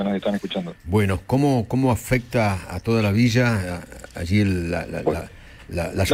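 Clock drift between sender and receiver runs through the whole clip. The sending side's audio clock is running fast, by roughly four percent, so samples arrive slightly quicker than the receiver plays them out. Its jitter buffer keeps swelling rather than holding steady, and the surplus has to be shed somewhere. Nothing drops out or goes silent. The strain shows as a faint restlessness in the timing, a sense that the sound is being nudged along instead of flowing at an even pace.

Repeated timing corrections are how the receiver sheds that surplus, from 0.16 s to 5.99 s. It trims short slices from the stream at irregular intervals, every edit cutting material away, never repeating any, so the net effect is playback at about 104 percent of its natural rate. Each cut is tiny, so no single one stands out. Together they leave playback running slightly fast across nearly the full duration.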